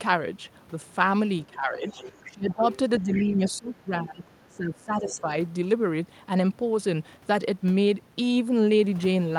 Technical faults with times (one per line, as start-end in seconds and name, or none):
1.47-2.64 speech suppressed in double talk
1.85-3.51 other side's voice leaking through
3.01-5.27 speech suppressed in double talk
5.09-5.21 other side's voice leaking through